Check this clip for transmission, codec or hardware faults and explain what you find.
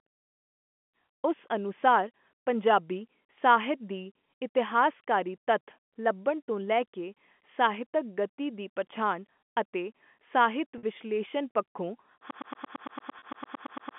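Two transmission faults turn up in this G.711 telephone speech, whose band stops around 3.4 kHz: packet loss concealed by pitch repetition, and a broken-record loop that runs to the end.

Packet loss with pitch repetition occurs at 10.78 to 10.83 s, right after "ਦੀ ਪਛਾਣ ਅਤੇ ਸਾਹਿਤ", and again at 13.19 to 13.22 s. The receiver had no audio for about 50 ms and then 30 ms, which fits five and three lost 10 ms packets. It filled each gap by repeating the last pitch period. Both gaps are short, so each sounds like a brief held, buzzy tone rather than a dropout.

The broken-record loop starts at 12.31 s and lasts until the clip ends. The source, most likely a stalled player or stream, kept sending the same 113 ms fragment, which repeats back to back about 15 times. The result is a rapid, stuttering cycle of identical sound. Whatever should have played after 12.31 s is gone, and the second concealment at 13.19 s falls inside this repeating stretch.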